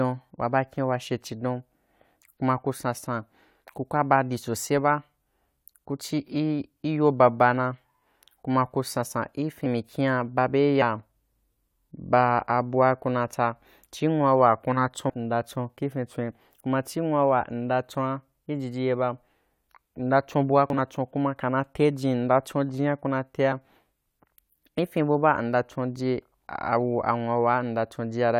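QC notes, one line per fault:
9.63–9.67 s, compressed frames skipped: roughly 50 ms of audio is gone. The decoder jumps ahead by whole frames.
20.70–20.78 s, compressed frames skipped: between "mnda cho bua" and "chon kuma kana" about 100 ms drops out, a longer jump of whole frames.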